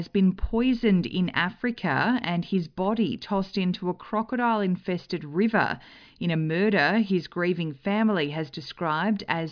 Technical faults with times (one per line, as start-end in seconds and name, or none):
none